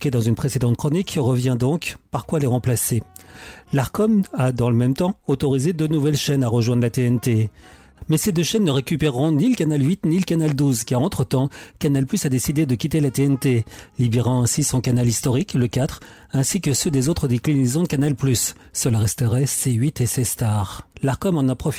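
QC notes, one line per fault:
No faults found on review; nothing to log.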